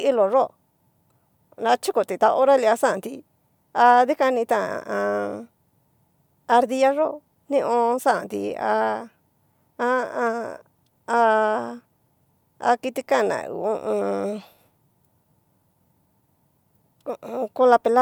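No technical faults can be heard anywhere in this speech recording.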